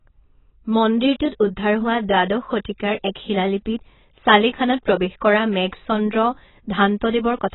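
From start to finish the speech has no content above about 3.9 kHz, so it sounds dull and muffled, with a smeared, warbling texture and a fizzy edge on sibilants. The likely cause is heavy AAC compression: an AAC-LC encoder starved of bits drops everything above a lowered cut-off and quantises the remaining bands coarsely, leaving gaps and unstable detail that shift from frame to frame. The damage fits a bitrate of roughly 16 kbps.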